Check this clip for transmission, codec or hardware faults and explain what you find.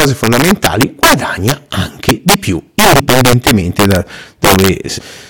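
Integer overflow runs throughout the speech: driven about 5 dB past full scale, a few percent of samples wrap to the opposite sign, giving violent cracks on loud peaks.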